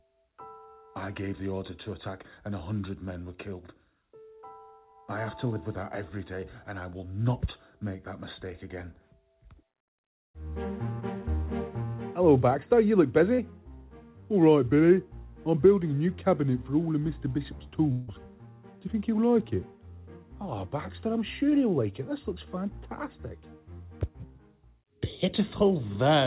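At 11.00 s and again at 13.35 to 13.40 s there is short concealed packet loss. About 20 ms and then 40 ms of audio never reached the decoder in time. The receiver extended the preceding sound across each gap and cross-faded back into the real signal, so each event is a quick smear or wobble. On a spectrogram, the harmonics or noise texture briefly freeze and repeat. The waveform shows a short stretch of continued sound with a slightly soft join at each edge.

From 17.92 to 18.09 s, about 0.16 s of sound is replaced by a synthetic continuation that turns buzzy and hissy as it fades. It never drops to true silence before the real audio resumes, and whatever belonged in that gap is missing. This points to a long network dropout as the likely cause. A spectrogram shows the spectrum smeared flat and dimming across that span, and the waveform envelope decays smoothly instead of following the surrounding sound. 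All of this sits inside a band that stops at 4 kHz, consistent with a G.711 mu-law call path at 64 kbps.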